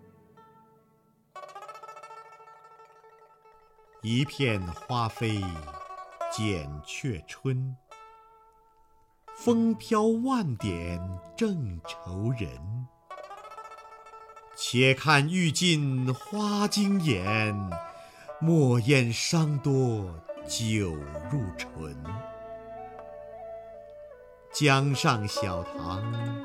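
Nothing in the recording stood out as a technical problem on listening.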